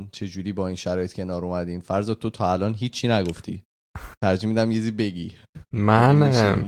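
No technical faults are audible.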